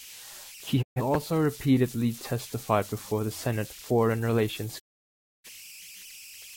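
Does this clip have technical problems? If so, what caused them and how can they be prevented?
Yes. Converter idle tones run through the whole clip: a tone around 3 kHz sits in the pauses and turns to grainy noise under the speech, at about 19 dB below the signal. A delta-sigma converter working without dither settles into repeating bit patterns whenever its input is small. Those patterns produce steady tones whose pitch follows the input's offset. Adding proper dither at the converter, or using one that dithers internally, prevents this.

Digital broadcast dropouts occur twice. The first runs from 0.81 to 1.01 s and ends just before "also repeatedly testified before". The sound fades to silence over about 20 ms, and a 128 ms stretch is lost, which fits three missing frames. The second runs from 4.78 to 5.50 s, with the same quick fade and 640 ms lost, which fits about fifteen frames. Each time the receiver lost the signal or rejected corrupted frames and muted until good data returned. 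Stronger reception, through a better antenna or position, prevents these gaps.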